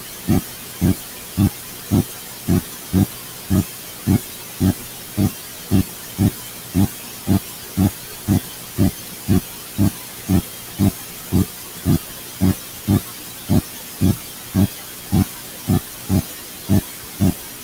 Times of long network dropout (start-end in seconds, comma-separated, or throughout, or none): none